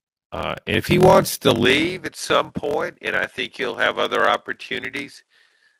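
From the start, the speech carries a steady buzz at 41.7 Hz. This is a block size mismatch (padded). Each block written is shorter than the block read, which fits 1024-sample writes, and the gap is filled with silence. Speech runs at 0.889 of normal speed, at about normal pitch.

At 1.66 s, just after "if he wants to", the sound turns duller. A faint new hiss appears, far below the speech. The level stays about the same, with no gap. The input was likely switched to a poorer device.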